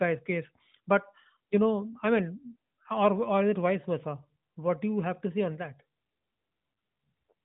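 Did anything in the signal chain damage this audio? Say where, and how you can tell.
No, nothing damaged it.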